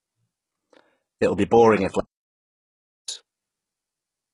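A speech clip likely passed through HE-AAC compression at a very low bitrate (the heavy damage fits something near 12 kbps), so only the lower spectrum was coded and the treble up to the 11.1 kHz cut-off was rebuilt by spectral band replication, leaving s sounds gritty and metallic. From 2.00 to 3.08 s the input likely dropped out and silence was recorded instead, an audio dropout to silence that leaves a gap of about 1.08 s, with no room tone and the speech in it lost.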